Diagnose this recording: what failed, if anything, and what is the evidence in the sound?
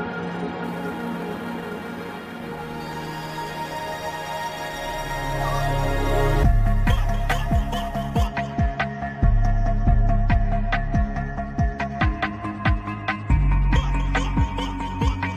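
Sample clock jitter at the converter, from 0.64 to 8.27 s: a hiss and roughness that swells with loud, bright passages and disappears in gaps. Timing wander of around ten microseconds turns the waveform's slope into error roughly 25 dB below the signal. A spectrogram shows a broadband haze tracking high-frequency energy.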